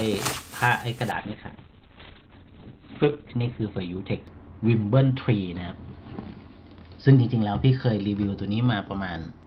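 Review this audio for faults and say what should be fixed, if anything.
A call bitrate drop begins at 1.12 s and lasts to the end at 9.46 s: bandwidth falls from 20 kHz to 4 kHz, leaving the sound muffled and coarse, consistent with the encoder cutting from roughly 32 to 6 kbps, bottoming out for 2.15 s without recovering. Prevent it by setting a higher minimum encoder bitrate and smoothing bandwidth-estimate reactions to transient congestion.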